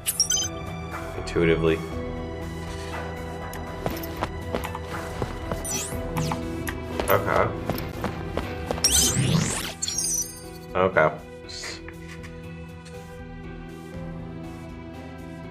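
Twice, a block of samples was replaced by zeros, leaving a block of digital silence. At 7.92 s the gap lasts about 11.6 ms, which fits a 512-sample buffer going out empty, and at 9.62 s a shorter gap of about 7 ms follows. The sound drops to zero and returns with no fade. Both holes are too brief to register as pauses, so each is heard as a tick or dip.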